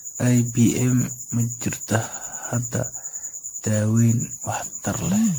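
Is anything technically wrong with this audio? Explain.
Yes. Generation loss throughout: the speech sounds swirly, smeared and hollow, with blurred attacks, likely from about ten MP3 re-encodes, consistent with 96 kbit/s, each quantising on shifted frames.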